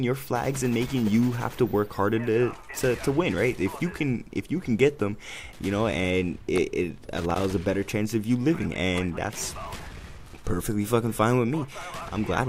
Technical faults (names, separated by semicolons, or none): loose connector crackle